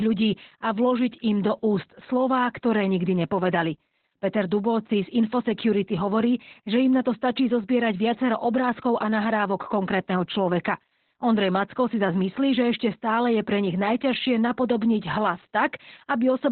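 From start to finish the speech carries heavy Opus voice compression. The coder has fallen back to narrowband SILK, so nothing is left above about 4.2 kHz. Sibilants lose their edge, and the voice turns muffled, hoarse and faintly robotic because the excitation is coded so coarsely, which points to a rate near 8 kbps. On a spectrogram the energy stops at a flat ceiling near 4.2 kHz, and harmonics look smeared and blocky in steps consistent with 20 ms frames.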